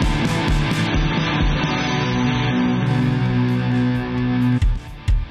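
Adaptive stream at a lower bitrate, from 0.86 to 2.86 s: the audio abruptly loses everything above 6.3 kHz and grows coarser with codec artefacts, then snaps back without a gap. The stream temporarily switched to a leaner encoding, which fits a drop from about 96 to 24 kbit/s AAC.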